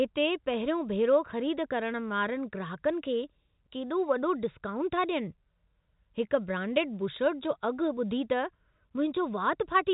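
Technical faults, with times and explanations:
Nothing here counts as a technical fault; the speech has the narrow sound of an ordinary G.711 telephone line, with nothing above about 3.8 kHz, which is just how that format works.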